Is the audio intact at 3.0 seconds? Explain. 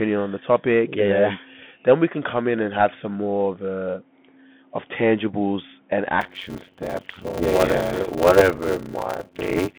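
No. At 3.0 s, as throughout the clip, the speech passes through a Bluetooth CVSD headset codec. It encodes one bit per sample at 64 kHz, each bit stepping the signal up or down by an adaptive amount. Loud high-frequency sounds outrun that step and distort, s sounds turn scratchy, and a granular hiss sits under the voice. A spectrogram shows energy confined to roughly 150 Hz to 3.5 kHz, cut off completely above 4 kHz, over a grainy noise floor.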